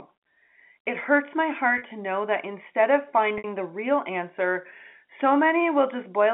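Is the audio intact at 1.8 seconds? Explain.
No. From 1.78 to 1.82 s, between "hurts my" and "to know that instead", there is packet loss with pitch repetition: about 40 ms of audio, consistent with two lost packets, is bridged by repeating the last pitch period, giving a briefly held, buzzy sound.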